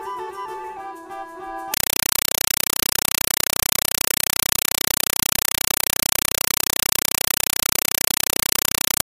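From 1.74 s to the end the audio is replaced by very loud, chattering static: a compressed stream played as audio. Bursts of noise about 5.33 ms long repeat 31.25 times a second with silence between them, which fits an undecoded 256 kbps AC-3 bitstream passed through as PCM.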